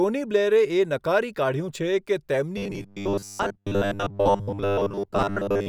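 Robotic sound from repeated short buffers runs from 2.57 s to 5.68 s in this speech clip, leaving a rigid, metallic buzz at 100 Hz. This is likely caused by a 10 ms buffer being replayed to fill gaps for most of that stretch while fresh audio is skipped.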